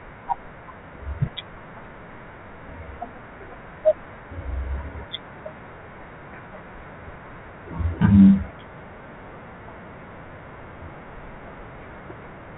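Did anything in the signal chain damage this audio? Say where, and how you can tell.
No, the speech shows no damage from any stage of the chain: it has passed through G.711 mu-law telephone coding at 64 kbps, which limits it to the band below 4 kHz and leaves only a faint level-following quantisation hiss well beneath the signal, exactly what that telephone path normally produces.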